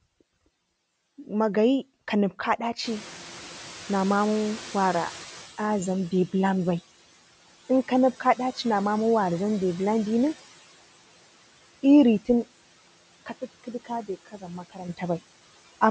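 Throughout the speech, a noise suppressor works frame by frame, pulling down every frequency band it judges to be steady noise by about 16 dB. The background therefore dips in the gaps between words and swells back up beneath them. The voice sits in a band that stops at 8 kHz.

From 2.84 s to 6.0 s the noise suppressor is catching up. The room noise rises sharply by about 19 dB near the 3 s mark, and the suppressor's noise estimate trails behind that change. For the first stretch the louder background comes through with little reduction, then sinks gradually as the estimate adapts over roughly 3.16 s, ending at about 13 dB of reduction once it has settled.

At 13.3 s there is a sudden gain jump. The overall level, voice and background together, steps down abruptly by about 8 dB rather than fading, and it stays at that lower level until 14.89 s. Because the noise floor shifts in exactly the same step as the speech, this is likely a digital gain setting applied from one sample to the next without any ramp.

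Inside that quieter stretch, between 14.25 s and 14.44 s, comes speech cut by the noise suppressor. Here the suppressor mistakes part of the voice for background and turns it down along with the noise, cutting it by up to about 13 dB. Roughly a tenth of a second in total is affected, and those sounds come across as swallowed and faint, sinking into the background rather than carrying through.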